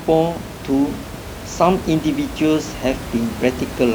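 No faults to report in the speech, with only room noise sitting about 12 dB beneath it as part of the recording itself.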